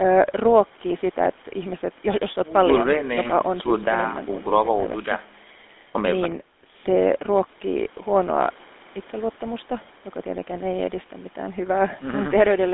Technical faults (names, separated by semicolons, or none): GSM full-rate codec